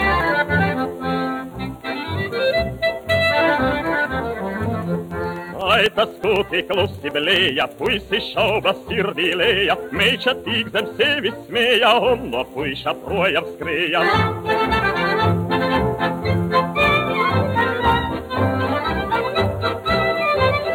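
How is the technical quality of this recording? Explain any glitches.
The quality suffers from periodic USB or driver dropouts between 5.11 and 7.99 s. A recurring task stalls the audio path every 0.125 s, and each stall blanks roughly a millisecond to silence, giving about twenty evenly spaced ticks while sound is present.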